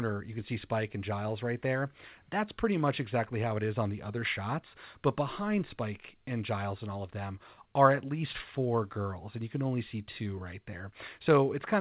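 Nothing stood out on listening to this speech recording, which carries the narrowband sound of a G.711 mu-law call path with nothing above 4 kHz.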